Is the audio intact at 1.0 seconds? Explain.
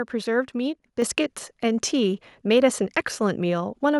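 No. At 1.02 s the microphone volume stepped up: the calling software judged the input too quiet and raised the device's capture gain in a single jump of about 6 dB. Because the change happens at the microphone rather than on the voice alone, the speech and the background noise behind it both become suddenly louder at that instant, an abrupt level shift.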